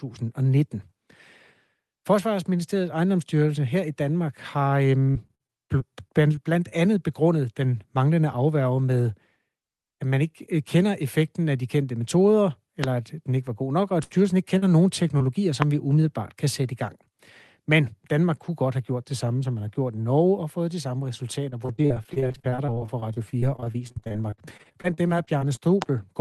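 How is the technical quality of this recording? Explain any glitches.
The recording is a call over a low-bitrate codec whose audio tops out around 12 kHz, which fits Opus at roughly 24 kbps. Four kinds of glitch break it up: repeated packet loss, single packet-loss bursts, short concealed losses and loud pops.

Repeated packet loss (robotic sound) occurs in two stretches. The first runs from 5.11 to 6.73 s and ends just before "andet begrundet den manglende". It has nine gaps, the longest 50 ms, totalling about 0.22 s of missing audio. The second is worse. It runs from 21.50 to 25.59 s, right after "og fået de samme", with 47 gaps of up to 41 ms, so about 0.98 s is lost and roughly a quarter of that span is synthetic. Each hole is patched by extending the previous sound, and the next hole arrives before the voice recovers. The result is a choppy, metallic, robotic texture. What sets this apart from the isolated losses below is the sheer density of the holes.

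A burst of packet loss follows "god nok og at", from 14.03 to 14.12 s. About 60 ms went missing at once. The receiver stretched the last sound and faded it down, and the speech resumes with that piece gone. This is a single longer hole rather than a train of them.

Short concealed packet loss appears at 14.58 to 14.64 s (40 ms) and 15.18 to 15.22 s (20 ms). These holes are brief enough that the concealment blends back into the real audio almost at once. They come across as a quick smear or wobble, and a consonant may vanish. They are shorter than the burst just before them.

Loud pops land at 12.84 to 12.86 s, 15.62 to 15.64 s and 25.82 to 25.84 s. Each is a single sharp click of about 20 ms, roughly 20 dB above the speech at the first two and about 15 dB at the last. They were likely caused by an electrical transient such as a switch, static or a driver glitch. Unlike packet loss, nothing is missing: the pop sits on top of the speech, which carries on underneath.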